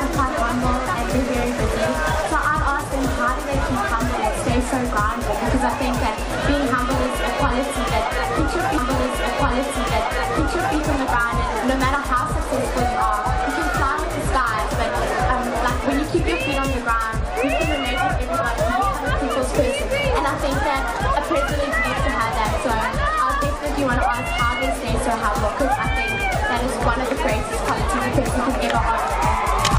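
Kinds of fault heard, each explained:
Stream segment repeated: the player fetched or queued the same chunk of the stream twice, so a stretch of the programme is played a second time in place of moving on. Here about 2.0 s of audio is heard again, from 8.77 s to 10.76 s, adding roughly that much to the running time. A small blip marks the jump back, and the material from just before that jump then continues again from the start of the repeated block.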